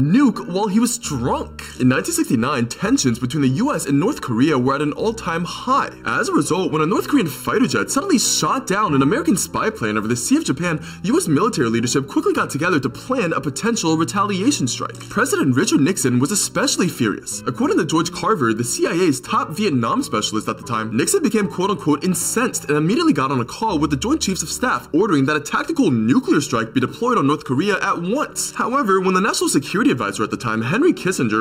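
Channel delay (comb filtering) runs from start to end. One channel arrives less than a millisecond late, and the two are summed to mono. Cancellation carves fixed notches from around 700 Hz upward, repeating across the spectrum. The sound is hollow and phasey throughout.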